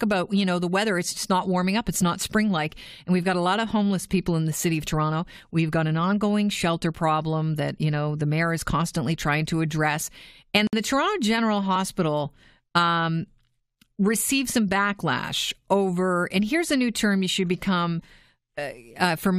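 At 10.67 s the speech drops out for about 58 ms, ending at 10.73 s: a gap at a join of encoded pieces. Two separately encoded segments were butted together untrimmed, so encoder start delay and end padding remain as silence with smeared edges before the speech resumes.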